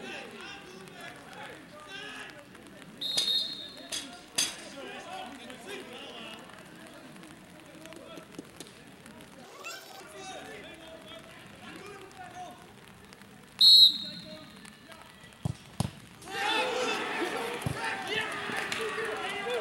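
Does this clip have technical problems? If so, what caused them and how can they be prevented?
Yes. From 9.44 to 10.00 s, the audio was read two samples at a time and plays at double speed, an octave higher. Pairs of samples were taken as single frames. Matching the reader's channel count and sample width to the stream's real format prevents this.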